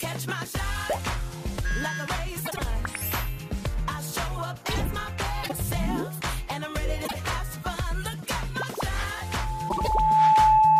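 Frames out of order garble the audio at 2.45, 5.43, 7.05 and 9.69 s, where neighbouring blocks of 26 to 78 ms swap places. Each swap produces a brief flutter, visible as abrupt vertical seams in the spectrogram. From 9.10 s to the end, a loudspeaker feedback squeal builds over about a second into a steady 870 Hz tone around 10 dB above the signal, drawn as a bright horizontal line while the waveform swells.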